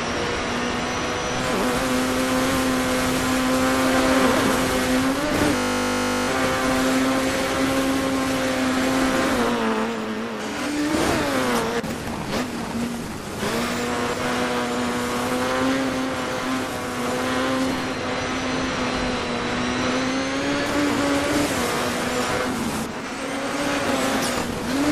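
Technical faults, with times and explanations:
5.56–6.28 s, system hang loop: the computer or its audio driver stalled while the sound hardware went on replaying the same 20 ms stretch of its ring buffer, 36 times in a row. A loop that short repeats 50 times a second, so the copies fuse into a steady 50 Hz buzz rather than a stutter. The audio that should have filled that gap, roughly seven tenths of a second, is lost, and the sound picks up again with a jump.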